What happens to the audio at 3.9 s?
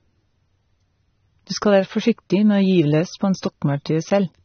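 At 3.9 s the speech is dull and smeared, with nothing above about 6.3 kHz and a warbling, fizzy texture on sibilants. The same damage runs through the whole clip, and the likely cause is AAC compression at a low bitrate, around 27 kbps. The encoder drops high bands and quantises the rest coarsely. A plain low-pass filter would cut the top cleanly, but here the remaining spectrum also shimmers.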